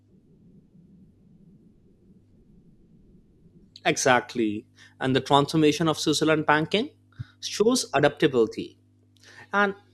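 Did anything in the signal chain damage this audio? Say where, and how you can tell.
No, no signal-chain damage heard.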